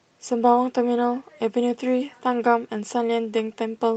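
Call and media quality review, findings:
No faults found; call path audio sounds as expected.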